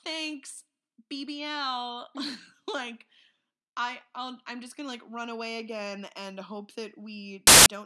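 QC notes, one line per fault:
7.47–7.66 s, file tags played as audio: the decoder read an embedded cover picture's compressed data as if it were samples, so the speech cuts straight into a burst of very loud white noise lasting about 0.19 s, with abrupt hard edges at both ends.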